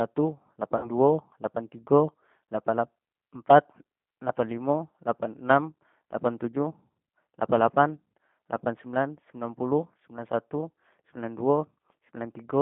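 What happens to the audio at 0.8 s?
From 0.77 to 0.90 s the speech smears into a short buzzy tone or coloured noise that fades, and it takes a moment to recover before "duo lapan tigo lapan". This is VoIP packet loss concealed by the speech codec. About 60 ms of audio went missing, which fits three 20 ms packets. The decoder filled the gap by repeating its last pitch period and vocal tract filter at falling gain. Each new frame depends on the one before, so the voice just after the gap still comes through weak or distorted.

Around that moment, as across the whole clip, the sound is narrow, roughly 150 Hz to 3.5 kHz, with a plainly rough, slightly synthetic texture. That is the G.729 codec, here the G.729A variant at 8 kbit/s. It rebuilds speech from a filter model, a pitch predictor and a few coded pulses in each 10 ms frame, and it discards everything above the telephone band.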